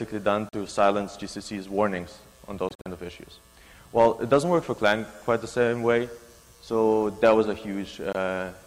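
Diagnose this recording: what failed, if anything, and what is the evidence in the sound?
The audio cuts out at 0.49–0.55 s, in broken gaps across 2.69–2.87 s, and at 8.13–8.16 s, then resumes as if it had played on. This is a likely Bluetooth dropout at playback, losing chunks of about 21 ms. Spectrograms show blank vertical columns, and waveforms show flat gaps.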